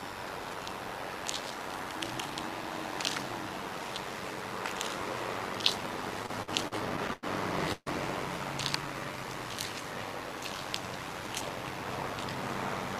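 The whole clip carries overlap-add ripple: the level pumps by about 6 dB roughly a hundred times a second, because the reassembled frames don't overlap to a constant gain. Between 6.23 and 7.25 s there are repeated stalls (stutter), nine little hold-ups where the last sound gets stretched, 251 ms in all with the longest at 94 ms, so the audio drags while nothing is actually lost. At 7.73 to 7.88 s there's a call audio freeze: about 137 ms of continued sound, including about 30 ms of silence, before it resumes exactly where it stopped, most likely from packets held up in transit draining the jitter buffer. A jitter buffer slow-down runs from 8.77 to 9.24 s, with repeated pitch periods adding 75 ms and dropping playback to 86% speed at unchanged pitch. Then from 11.13 to 12.43 s a jitter buffer speed-up trims roughly 150 ms, pushing things to 112% speed, which comes across as hurried while the pitch stays put.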